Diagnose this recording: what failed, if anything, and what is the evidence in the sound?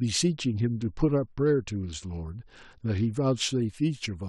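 From 0.35 s to 3.36 s the speech turns dull and muffled, its treble largely gone, and a gritty, grainy noise rides under it until the clarity returns. This is a Bluetooth SBC bit pool drop at the codec stage. Under link congestion the encoder cut its bit budget, which fits a fall from a bit pool of 31 to 9, near 72 kbps. The upper sub-bands were starved and the remaining ones coarsely quantised.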